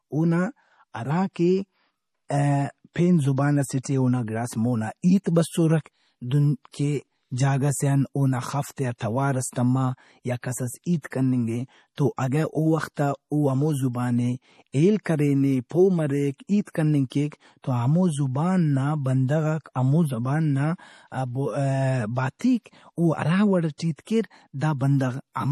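Speech recorded here has been squeezed through a lossy encoder, and the damage is plainly audible, most likely from MP3 compression at a low bitrate, in keeping with roughly 40 kbps. Short of bits, the encoder has removed everything above 14.6 kHz and is dropping weak frequency lines that flicker in and out from frame to frame. The result is a dull top end with a watery, swirling texture through the whole clip, and sibilants and consonant onsets come out smeared. At 22.39 s a sharp attack lands late in a transform block, so quantisation noise sized for the loud onset spills into the quiet moment before it. That is pre-echo: a hiss about 17 ms long runs ahead of the attack, which itself sounds softened and blurred.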